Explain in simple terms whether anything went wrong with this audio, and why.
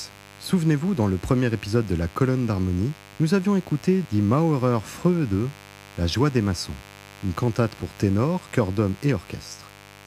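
There's a mains buzz running under the speech for the whole clip, start to finish. Something like a dimmer or an unshielded cable is letting sharp spikes from the 50 Hz power supply leak in, which gives that steady, raspy hum sitting clearly below the voice.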